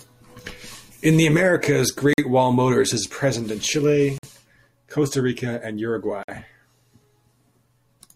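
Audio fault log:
2.13–2.18 s, 4.18–4.23 s, 6.23–6.29 s: gap between stream segments. Timestamps of consecutive 2-second segments leave a small hole, which the player fills with silence. The speech drops out for 47 to 52 ms with hard edges at each join. Nothing is lost; everything afterwards just arrives later.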